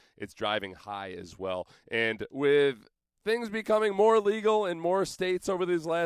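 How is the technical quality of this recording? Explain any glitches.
No glitches can be heard anywhere in this speech recording. Nothing in it calls for a technical explanation.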